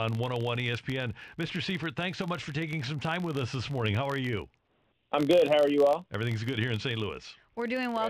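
A speech recording carries a low buzz from start to finish. The buzz sits at about 46.9 Hz. It is a filter restarted on every block. The filter loses its stored state at each block boundary and begins again from silence. That restart leaves a small transient at the start of every block. The repeat rate fits a 1024-sample block. The buzz rises and falls with the level of the speech.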